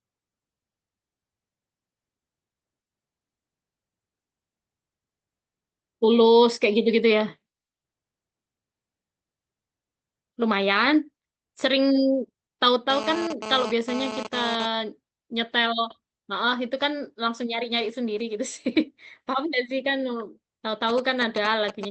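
From 12.90 to 14.66 s a GSM phone buzz appears, about 9 dB below the speech. A nearby 2G handset transferring data pulses its transmitter at 217 Hz, and the audio circuitry rectifies those bursts into a harsh, harmonic-rich rasp that starts and stops with the transfer.

From 20.89 s to the end, GSM signalling bursts intrude, roughly 10 dB under the speech. The handset is sending only brief groups of radio bursts, which the circuitry rectifies into a galloping dit-dit-dit of short 217 Hz buzzes.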